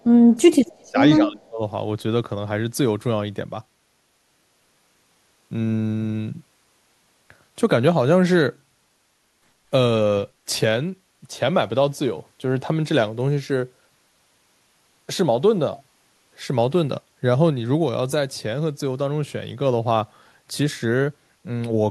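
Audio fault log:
0.00–0.34, 0.83–0.98 and 1.18–1.62 s, speech suppressed in double talk: the speech dips by about 20, 15 and 25 dB. This is likely an echo canceller turning down everything while the far side also talks. The waveform shows sudden hollowed envelopes.
0.63–0.88 s, echo leak: a faint copy of the speech returns 212 ms late, about 30 dB below it. This is likely loudspeaker sound that the far-end canceller failed to remove. The spectrogram shows weak harmonic traces repeating the earlier pattern, offset in time.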